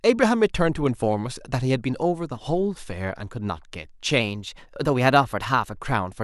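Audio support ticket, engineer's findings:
Drift correction step, 4.21–5.79 s. Speech runs about 5.4% fast and about 91 cents sharp, nearly a semitone, then snaps back. Likely clock-sync resampler abruptly raising playback rate to drain its buffer, shifting speed and pitch together.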